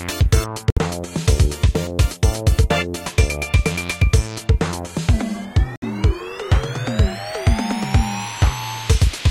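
A Bluetooth dropout, most likely, cuts the audio twice: from 0.70 to 0.78 s and again from 5.76 to 5.84 s. Each hole is a silence of roughly 64 ms, which fits about three packets failing to reach the headphones in time and being discarded. The sound drops out, then returns further along, as though it had kept playing through the gap, so a short slice of the material is simply missing.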